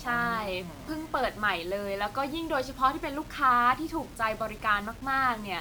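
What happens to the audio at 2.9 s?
At 2.9 s the speech sounds grainy and gritty, and the roughness follows the voice itself. This runs through the whole clip. The likely cause is low bit depth without dither, truncated to what fits about 7 bits, leaving error roughly 25 dB below the signal.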